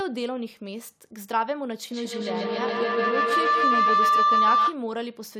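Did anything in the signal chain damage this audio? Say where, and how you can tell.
Yes: feedback howl enters from 1.91 s to 4.86 s, at the call stage, where two devices in the same room have formed an acoustic loop. Each pass from loudspeaker back into microphone adds gain, so the repeats grow instead of decaying and narrow to a tone near 1 kHz, peaking about 9 dB above the speech. A spectrogram shows a bright horizontal line there, and the waveform shows a swelling envelope, with repeats roughly every 150 ms, the loop's round-trip delay.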